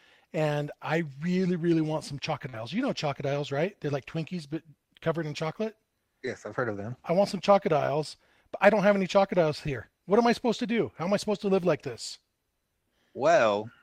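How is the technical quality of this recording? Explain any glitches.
The recording has two kinds of packet-loss damage, both brief, in the speech.

Short concealed packet loss: at 2.49 to 2.55 s, just after "really really want some", about 40 ms of audio failed to arrive in time. The decoder bridged the gap by extending the preceding sound, voiced or noise-like, and crossfaded back. The result is a short smear or wobble.

Lost packet rebuilt from error correction: at 2.53 to 2.55 s, overlapping the first fault, and again at 12.13 to 12.15 s after "supposed to live like", a single lost packet was replaced by the low-bitrate copy carried in the next packet. Each 20 ms patch plays without a gap but sounds rougher and noisier.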